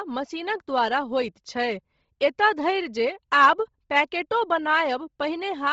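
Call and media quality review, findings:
Breathy, grainy speech throughout, hard band edge near 7.7 kHz, noisy hiss in the upper band. Likely Bluetooth LC3 compression: heavy damage consistent with roughly 24 kbps, 7.5 ms frames, highs zeroed and noise-filled.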